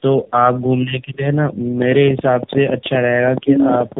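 From start to finish the speech carries the marks of tandem speech coding: it sounds as if the call was decoded and re-encoded at several network borders. The rough, watery grain fits a low-rate AMR-NB stage, likely reached after a CVSD link and G.711 hops, with two AMR passes stacked. Nothing reaches above 3.8 kHz, so the sound is muffled. What separates this from a single narrowband codec is the compounding: the warble and buzz are heavier than any one coder leaves on its own.

From 1.82 s to 3.98 s a train of clicks rides over the audio, about ten per second at an uneven pace, roughly twenty in all. The sharpest ones stand around 10 dB above the speech. The clicks all have much the same shape and keep going through the pauses. That sets them apart from codec crackle, which follows the speech and drops away in gaps. The likely source is electrical interference or a struggling interface injecting pulses.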